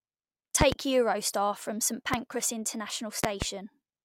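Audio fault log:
0.61–0.75 s, 2.14–2.17 s, 3.24–3.45 s: loud pop. Paired sharp pops in the first and third spans, a single one in the second, peaking about 20 to 25 dB above the speech, which continues underneath. These are likely voltage pulses from a plug, switch, static or driver glitch.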